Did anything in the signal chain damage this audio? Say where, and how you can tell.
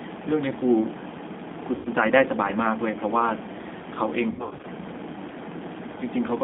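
Yes. The codec stage damaged it throughout. The whole clip is confined to roughly 200 Hz to 3.6 kHz, and the speech sounds rough and slightly synthetic. That points to the G.729 codec at 8 kbit/s, rebuilding each frame from a filter, a pitch predictor and sparse pulses.

The network stage dropped packets, and the G.729 decoder concealed the VoIP packet loss. At 1.75 to 1.89 s about 100 ms is missing, which fits five lost packets. From 4.31 to 4.66 s, 200 ms is missing in gaps scattered over 320 ms, with the longest run 80 ms. Each gap is stretched into a buzzy tone or coloured noise that fades, because the decoder repeats its last pitch and filter at falling gain.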